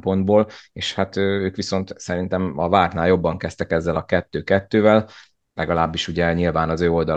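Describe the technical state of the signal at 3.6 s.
At 3.6 s the speech signal is intact, with no dropout, clipping, glitch or other audible fault at that point.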